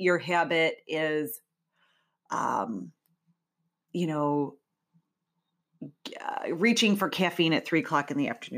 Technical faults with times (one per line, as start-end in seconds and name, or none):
none